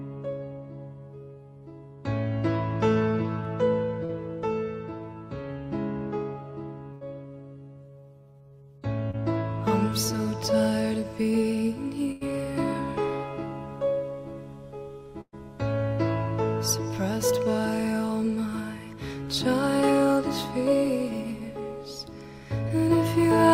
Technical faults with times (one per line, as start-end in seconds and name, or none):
4.05-4.11 short concealed packet loss
6.93-7.03 burst of packet loss
9.11-9.15 short concealed packet loss
12.11-12.23 burst of packet loss
15.21-15.35 burst of packet loss
22.69-22.72 short concealed packet loss